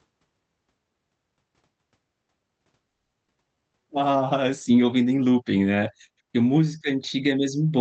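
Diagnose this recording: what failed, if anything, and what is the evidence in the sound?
Network stage: a call audio freeze, likely from packets delayed in transit until the jitter buffer ran dry. From 2.89 to 3.15 s the receiver stretched the last sound into a fading buzz or hiss, about 240 ms filled in all and ending in 40 ms of silence, then resumed with nothing lost.

Jitter buffer stage: a skip ahead at 3.27 to 3.30 s. Roughly a tenth of a second of audio was dropped, in transit or by the buffer, to catch up. Playback jumps forward across a 10 ms join, with that stretch of speech missing.

Jitter buffer stage again: a slow-down from 3.31 to 3.99 s, just before "sim ouvindo nem looping". The receiver rebuilt its reserve by repeating pitch periods, adding 116 ms. Speech plays at 84% speed with unchanged pitch, sounding drawn out.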